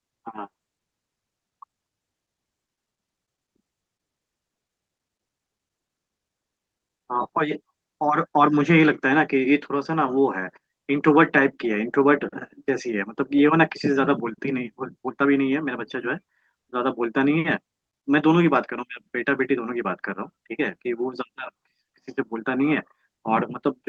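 No technical faults can be heard in this speech recording. It has the coding texture of a call codec such as Opus, with high frequencies cut off at about 12 kHz.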